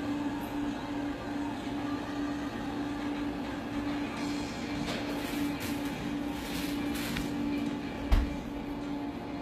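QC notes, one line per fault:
Throughout: HE-AAC compression. The treble sounds gritty and metallic, and nothing reaches above 14.9 kHz. The likely cause is spectral band replication, which rebuilds the upper bands from copied lower ones, so harmonics misalign there. The plainly audible damage fits about 20 kbps.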